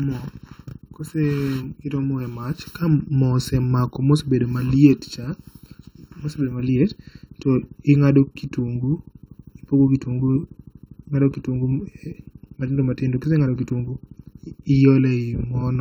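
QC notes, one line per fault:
Throughout, channel delay (comb filtering): one channel lags by under a millisecond; mono sum notches at even intervals from around 700 Hz, making speech hollow.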